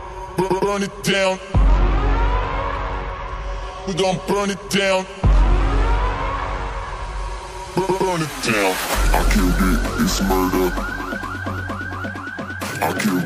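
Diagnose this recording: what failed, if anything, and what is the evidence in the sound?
No dropout, clipping, glitch or other technical fault can be heard anywhere in the signal, and none of the capture, processing or playback stages shows signs of failure.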